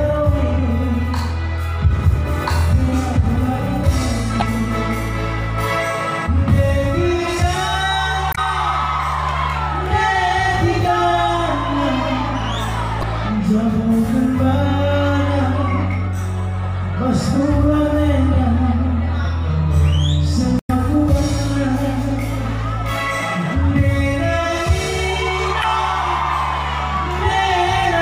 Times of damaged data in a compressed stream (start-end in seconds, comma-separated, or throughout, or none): 4.38-4.43, 8.30-8.38, 12.99-13.04, 20.57-20.71, 25.60-25.64